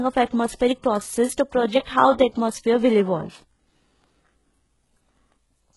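Throughout, s sounds are gritty and lispy and the treble metallic, with nothing above 11.5 kHz. This is likely HE-AAC compression rebuilding treble from copied lower bands, which fits about 12 kbps.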